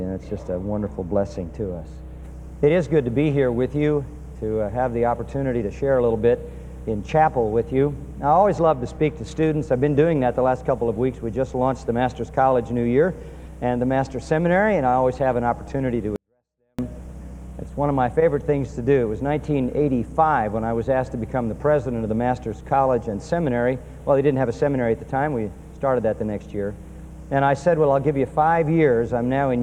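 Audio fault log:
16.16 to 16.79 s, 24-bit alignment error (too quiet): for about 0.63 s the sound doesn't distort or thin out, it just sinks to a whisper, roughly 48 dB down, then snaps back to full level. What's happening is that 24-bit samples sitting in the low bytes of a 32-bit word get read as if they were full 32-bit integers, so every value lands 2^8 smaller than it should. The waveform keeps its shape, only the scale collapses.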